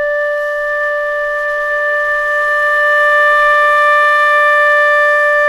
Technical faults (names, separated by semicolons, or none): none